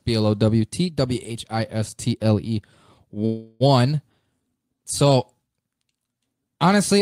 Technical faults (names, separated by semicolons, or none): call audio freeze